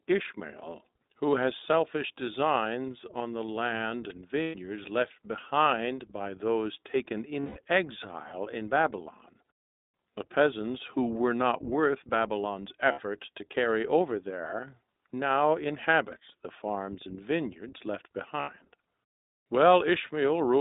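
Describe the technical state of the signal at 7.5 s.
At 7.5 s the signal is inside a burst of lost iLBC frames, running from 7.40 to 7.58 s between "behind by those taken" and "exile in". For those 160 ms, consistent with eight 20 ms frames, the decoder repeats the last pitch cycle blended with noise, producing a held, buzzy vowel-like tone until normal speech resumes. Underneath, the iLBC codec limits the band to roughly 200 Hz–3.7 kHz and adds a plainly audible rough, synthetic texture.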